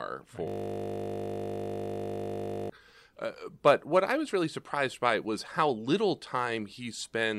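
A system hang loop from 0.48 to 2.70 s: the computer or driver froze while a 20 ms buffer replayed, turning the speech into a steady 50 Hz buzz.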